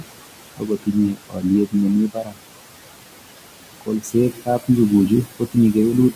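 Noise suppressor artifacts run through the whole clip. The suppressor pulls the room noise down by about 18 dB, frame by frame. That noise sits about 14 dB below the speech. The noise sinks between the words and rises under them.

Speech cut by the noise suppressor comes in seven places: 0.0 to 0.09 s, 0.57 to 1.45 s, 1.66 to 1.76 s, 2.07 to 2.39 s, 3.81 to 4.15 s, 4.32 to 4.69 s, and 5.26 to 5.56 s. The suppressor mistakes quiet parts of the speech for noise. It turns them down by about 16 to 19 dB. Within each span, parts of the speech sound faint or swallowed.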